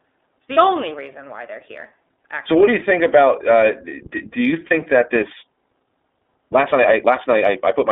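A speech recording passed through the iLBC codec in its 30 ms frame mode, limiting the band to roughly 300 Hz to 3.6 kHz and giving the voice a plainly rough, synthetic edge. Twice, at 0.54 to 0.58 s and 4.67 to 4.72 s, one lost iLBC frame was concealed by repeating the last pitch cycle, leaving a brief buzzy held vowel before the voice recovers. From 4.98 s to the end, the audio was likely sped up to about 1.42 times by a time-stretched section, so the pace jumps abruptly and sounds rushed while the pitch stays unchanged.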